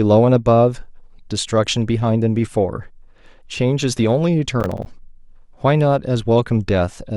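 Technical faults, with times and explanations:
4.60–4.86 s, processor overload crackle: missed processing deadlines leave a string of hard-edged silent gaps, which fits buffers of roughly 10 ms, heard as gritty crackle.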